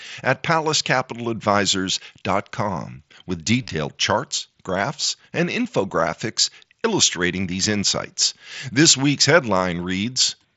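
From 3.62 to 3.70 s the speech turns briefly buzzy and tonal, held at full level, then warbles slightly as real audio resumes. At 5.89 s a single tiny gap is almost hidden. Both are concealed Bluetooth headset packet loss. Voice packets from the headset were dropped, about 52 ms of them scattered across 75 ms in the first case, with the longest run near 22 ms. The phone filled each gap by repeating the closest-matching recent stretch of waveform.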